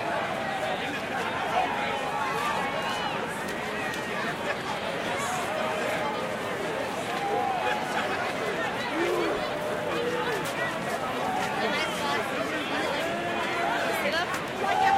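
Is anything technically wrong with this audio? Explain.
Yes, there's one small skip at 11.08 s. It's likely audio missing between chunks: the recorder seems to work in 6-second blocks and dropped roughly a hundredth of a second at a handover, butting the two sides together so the sound jumps slightly.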